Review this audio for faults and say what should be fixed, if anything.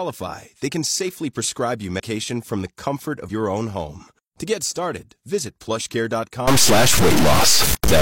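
Compressed frames skipped at 1.95–2.00 s, after "can safely prescribe you", and 3.25–3.31 s, after "from the comfort": about two 46.4 ms frames vanish each time, so roughly a tenth of a second is lost. Verify file integrity and re-encode from a clean source.

Stuck bit from 6.47 s to the end: distortion that, unlike clipping, stays even at low levels, with noise filling the pauses. The likely cause is one data bit stuck at a fixed value. Check the converter and its data lines.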